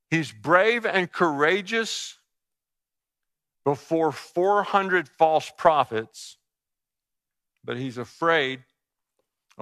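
No technical faults are audible.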